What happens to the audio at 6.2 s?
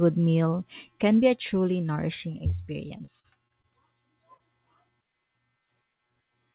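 At 6.2 s the speech comes through intact, with nothing there beyond the narrow telephone bandwidth of the call path, which leaves no sound above 4 kHz.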